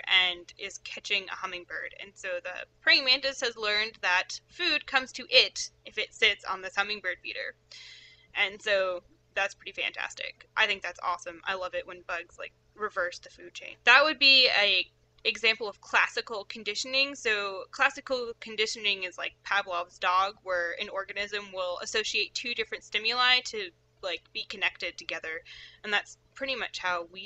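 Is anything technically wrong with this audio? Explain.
Yes. At 13.73 to 13.76 s the audio jumps abruptly ahead with a small blip, likely a stream segment skipped: one segment failed to load and the player continued with the next.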